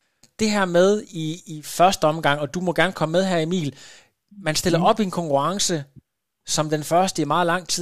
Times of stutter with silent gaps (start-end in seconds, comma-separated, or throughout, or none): none